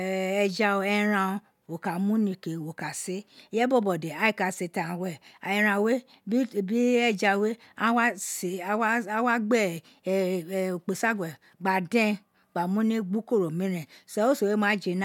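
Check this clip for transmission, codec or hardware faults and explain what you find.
No transmission, codec or hardware faults turn up in this clip.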